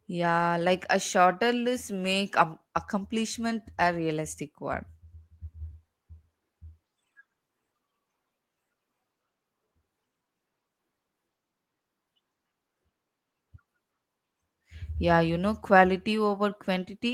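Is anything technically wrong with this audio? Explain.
No, nothing technically wrong can be heard in this speech recording. There is no fault to point to at any moment of it.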